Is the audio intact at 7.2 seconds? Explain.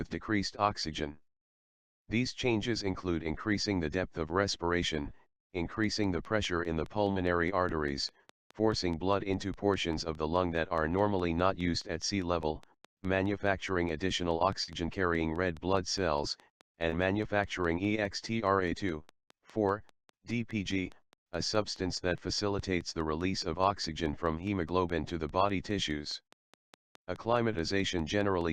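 No, not quite. There's a train of clicks running from 5.84 s to the end, a steady 4.8 ticks per second about as loud as the sound itself, likely interference or a faulty connection. Just before your mark, at 7.11 to 7.17 s, a short concealed packet loss dropped 40 ms. The receiver papered over it by extending the preceding sound, so you hear a brief smear.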